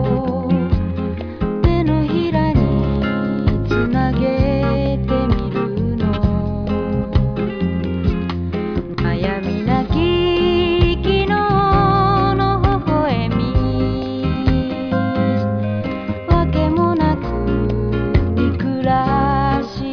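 No technical faults can be heard anywhere in this audio. Nothing breaks, drops out or shifts at any point in the clip.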